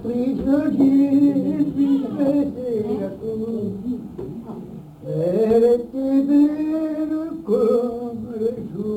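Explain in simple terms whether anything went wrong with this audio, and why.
Crude rate conversion runs throughout: samples were repeated rather than properly filtered, likely from 44.1 to 48 kHz, adding a gritty, unrelated fizz to loud, bright moments.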